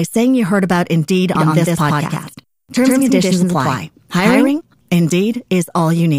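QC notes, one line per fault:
1.35–4.61 s: doubled audio track. A second full-band copy sits roughly 100 ms behind at about the same level, with no decay or room colour, likely from a slower capture path. The waveform shows repeated transients a fixed gap apart, and the spectrogram shows stacked onsets with abrupt start and stop edges.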